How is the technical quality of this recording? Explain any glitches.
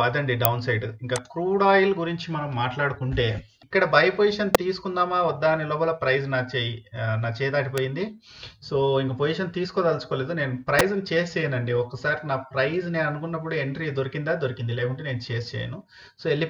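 The recording has four sharp, very brief snaps at 0.45, 4.55, 7.78 and 10.8 seconds. Each is an electrical switching spike, most likely a nearby switch, motor or static discharge arcing and inducing a pulse into the audio line. Three hit close to the converter's limit, and the one at 7.78 seconds is quieter, around -10 dBFS. They sit on top of the sound without interrupting it. That sets them apart from dropouts or digital glitches, where the audio itself breaks or goes missing.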